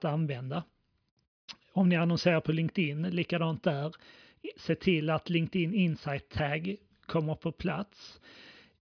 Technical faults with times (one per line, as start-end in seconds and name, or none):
none